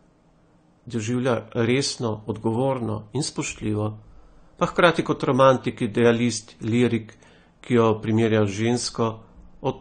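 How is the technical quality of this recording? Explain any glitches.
The quality is noticeably degraded by AAC compression throughout. Nothing is heard above 9 kHz. Sibilants fizz and warble instead of staying crisp, which likely points to an AAC-LC encode at a low rate, around 32 kbps. The encoder discards spectral detail and fills some bands coarsely. A simple low-pass filter would dull the top end but leave no warbling texture.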